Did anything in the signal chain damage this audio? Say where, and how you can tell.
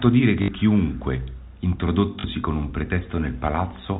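Yes. The network stage lost packets, twice. From 0.42 to 0.48 s, and from 2.20 to 2.24 s just before "con un", the speech stutters robotically. The receiver replayed the last packet over each gap. The buzz fits 20 ms packets.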